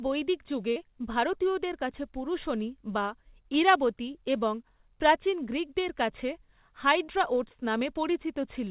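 At 0.72 to 0.79 s there is short concealed packet loss. About 40 ms of audio never arrived in time. The receiver covered the gap by extending the last stretch of speech, then faded back into the real signal. It is heard as a brief smear or wobble. The same fault returns at 7.04 to 7.11 s, with the same 40 ms gap. Both sit inside call audio that stops at 4 kHz, which fits G.711 mu-law.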